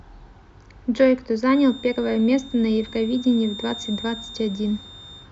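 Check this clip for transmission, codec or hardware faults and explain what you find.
One fault is present. From 1.45 s to the end there is a feedback whistle, a thin steady 3.6 kHz tone well below the speech, wavering slightly. A loudspeaker-to-microphone loop held just short of runaway is the likely cause.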